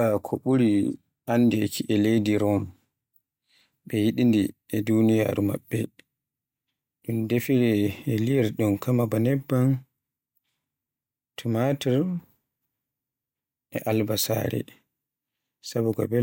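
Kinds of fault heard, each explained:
Nothing in the signal points to a technical fault: no dropouts, level jumps or other processing damage can be heard anywhere in the recording.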